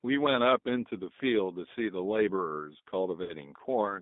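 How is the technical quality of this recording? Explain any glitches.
The recording is plainly shaped by a low-bitrate speech codec, and one short dropout near the end is covered over by concealment.

G.729 codec, throughout: the speech is carried at a bitrate that fits 8 kbit/s G.729A. The codec rebuilds each 10 ms frame from a vocal tract filter, a pitch predictor and a few coded pulses rather than the waveform itself. The line is confined to roughly 200 Hz to 3.7 kHz, so the speech sounds narrow and muffled, and the modelling damage is plainly audible as a rough, slightly synthetic grain.

VoIP packet loss concealed by the speech codec, 3.23 to 3.33 s: about 50 ms of audio went missing, which points to five lost 10 ms frames. With no new data, the decoder kept repeating its last pitch and filter settings while turning the gain down frame by frame. The gap is smeared into a brief, fading sound rather than silence. 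Because each frame is built on the one before, the speech stays thin and distorted for a moment after real packets resume.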